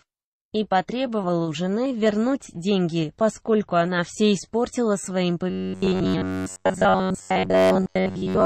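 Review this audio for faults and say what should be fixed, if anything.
From 5.50 s to the end there's robotic sound from repeated short buffers, a fixed 93.8 Hz buzz, likely from roughly 10.7 ms chunks looped while most real audio gets dropped. To fix it, make sure the audio keeps up with playback, say with a bigger buffer or a lighter processing load, so nothing has to be repeated.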